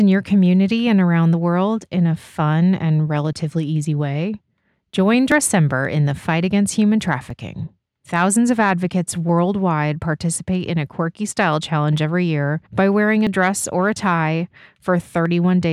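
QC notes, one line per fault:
1.34, 3.33, 5.32, 7.30, 9.29, 11.28, 13.27 and 15.26 s: audio missing between chunks. Brief skips recur every 2 s, each losing about 10 ms with the edges butted together. The likely cause is processing in 2-second chunks.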